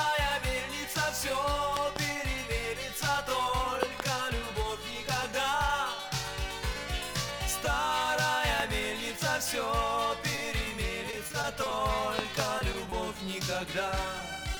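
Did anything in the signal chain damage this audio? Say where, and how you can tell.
Yes. Loud pops sit in the analogue wiring stage. Doubled pops come at 1.77–1.98 s, 3.83–4.02 s and 12.19–12.42 s, and a single one at 8.60–8.62 s. Each peaks about 20 dB above the sound, which continues underneath. A voltage step, likely from a plug or switch, was added.

Repeated packet loss with robotic sound comes from the network. From 10.35 to 11.73 s there are nine short holes. The longest is 30 ms, and about 12% of the stretch is patched. Each hole is filled by extending the last sound, so it turns choppy with pieces missing.

Short concealed packet loss also comes from the network. It occurs at 12.59–12.63 s, 12.90–12.94 s and 14.55–14.59 s. In each, 20 ms never arrived. The decoder continued the preceding sound and blended back, which leaves a brief smear or wobble.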